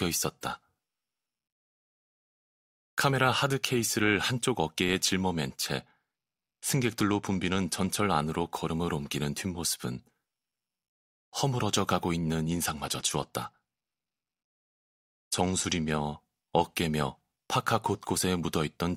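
From 5.80 to 8.01 s and again from 12.49 to 15.91 s, the speech shows a Bluetooth SBC bit pool drop. Treble dulls and gritty quantisation noise rises, consistent with the bit pool falling from about 31 to 13, near 94 kbps, on a congested link.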